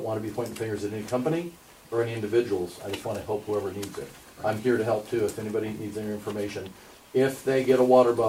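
Nothing here jumps out as a technical fault, so there's really nothing to flag in this one.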